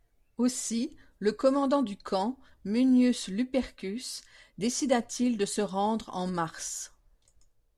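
Nothing stood out on listening to the speech here.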